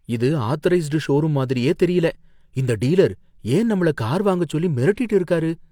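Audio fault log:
No faults are audible anywhere in this speech recording.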